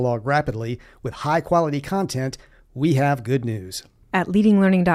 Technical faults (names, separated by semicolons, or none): none